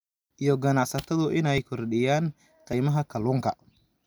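At 0.37 s, 1.58 s and 2.73 s the speech jumps forward with no gap, losing roughly 10 ms at the first two and about twice that at the third. The likely cause is a dropped buffer (overrun), where unread samples were overwritten and the two sides spliced together.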